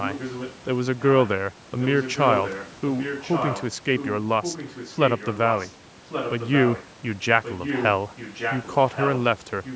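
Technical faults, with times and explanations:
0.01–0.56 s, 0.99–1.29 s, 1.80–3.67 s, 3.98–5.72 s, 6.09–6.86 s, 7.43–9.21 s and 9.64 s to the end: echo leak. A second copy of the speech trails it by 1.13 s, roughly 5 to 15 dB quieter, and is loudest at 1.80–3.67 s and 7.43–9.21 s. The likely cause is a speakerphone at the other end whose echo canceller failed to remove its microphone's pickup of the loudspeaker.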